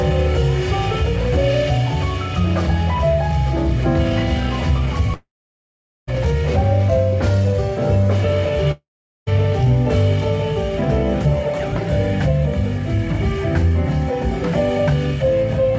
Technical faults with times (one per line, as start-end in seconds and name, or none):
5.14-6.09 long network dropout
8.71-9.29 long network dropout